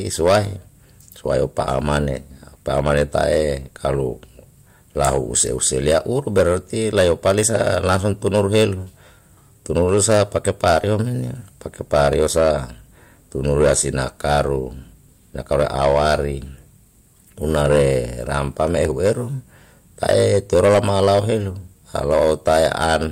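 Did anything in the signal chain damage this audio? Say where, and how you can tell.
Yes. Hard clipping runs through the whole speech clip. The signal was driven about 14 dB past the ceiling of a stage with a fixed maximum, most likely the converter input or a conversion into a fixed-point sample format. Roughly 2 percent of samples hit that limit and were cut flat. You can hear the flattened peaks as a harsh, crackling fuzz on every loud syllable, because squared-off waveform tops add harmonics high in the spectrum.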